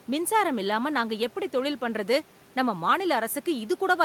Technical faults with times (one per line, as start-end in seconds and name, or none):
none